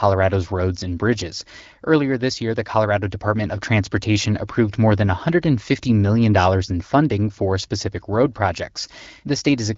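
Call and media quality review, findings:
Nothing stood out on listening to this speech clip, which comes through the AMR wideband (HD Voice) path at 12.65 kbit/s with its band topping out around 7.6 kHz.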